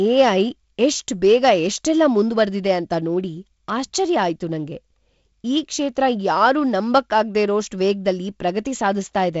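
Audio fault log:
No fault to log.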